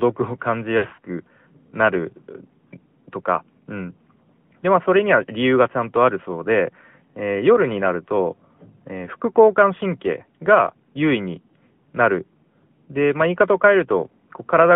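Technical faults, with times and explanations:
Throughout: AMR narrowband mobile codec. The sound is confined to roughly 150 Hz to 3.4 kHz, with nothing above 4 kHz. A pulse-driven vocal tract model rebuilds each frame, giving a plainly audible buzzy, synthetic edge that fits a mid rate near 10.2 kbps.
0.78 to 1.05 s: lost AMR speech frames. About 160 ms of frames failed over a 240 ms stretch, the longest gap 60 ms. The decoder repeated the last pitch and vocal tract settings at falling gain, so the speech briefly warbles, dips and smears.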